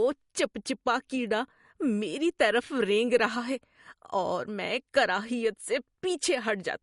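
From start to finish there's nothing above about 11.2 kHz, so the top end just stops, and the speech has a watery, swirly edge that's plainly audible. The s sounds chirp and consonant onsets smear. That pattern is most likely MP3 compression: starved of bits, the encoder chops the treble at a fixed point and drops quieter frequency lines that flicker in and out between frames, which fits a low bitrate around 48 kbps.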